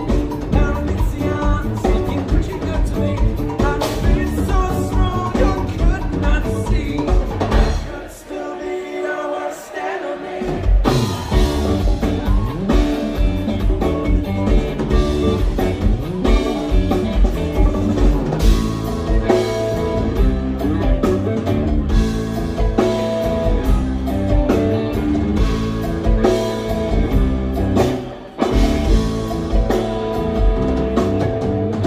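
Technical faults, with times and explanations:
No technical faults, with times and explanations, to report.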